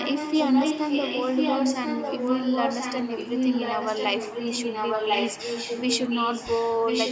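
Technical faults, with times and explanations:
Throughout, echo leak: the speech repeats 1.05 s late at roughly its original loudness, likely because an echo canceller let loudspeaker pickup back into the call.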